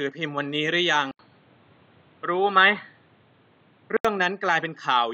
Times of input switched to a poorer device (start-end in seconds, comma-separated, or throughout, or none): 1.11-4.05